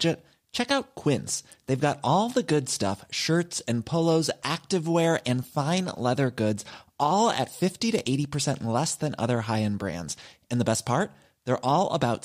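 Nothing goes wrong anywhere in this bit of speech, so there's no fault to point to at any moment.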